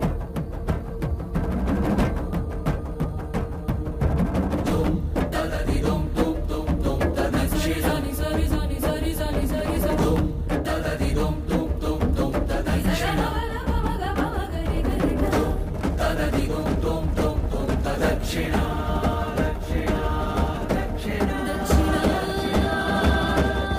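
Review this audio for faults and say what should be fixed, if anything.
A train of clicks runs from 4.81 s to 23.78 s, most likely from interference by nearby equipment or a faulty connection or power supply, which injects short pulses into the signal. The result is around seventy near-identical pops arriving unevenly at about 3.8 per second, peaking roughly 5 dB above the surrounding sound, so they tick through both the sound and its pauses. To prevent it, move or isolate interfering gear and check the interface's connections and load.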